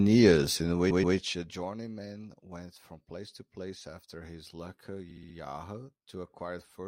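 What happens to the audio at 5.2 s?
Stuttering, 5.10 to 5.35 s: repeated frames, where a 64 ms block of coded speech plays four extra times, adding 256 ms.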